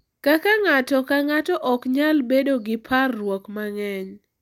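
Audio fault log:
No faults are audible anywhere in this speech.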